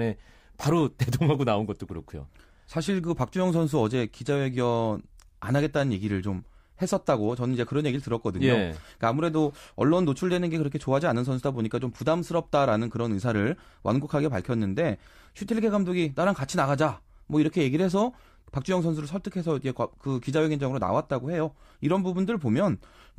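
Nothing goes wrong anywhere in this recording; there's simply no technical fault to point to at any moment.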